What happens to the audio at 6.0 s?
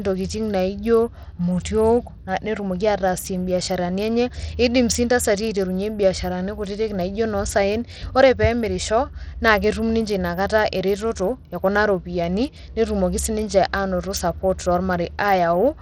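At 6.0 s the speech carries the same damage heard across the whole clip, likely from Bluetooth SBC compression. The codec splits the sound into a few wide bands. At a low rate, which fits about 80 kbps, the top bands starve. The treble flickers, with a gritty, aliased edge.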